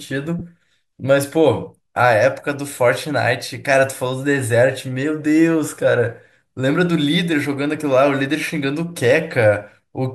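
Lost LE Audio frames interrupt this speech from 0.39 to 0.42 s. A 20 ms gap, which fits two dropped 10 ms frames, was concealed by the decoder repeating the last spectrum with randomised signs, leaving a brief noisy smear. The light coding texture around it is likely from LC3 compression.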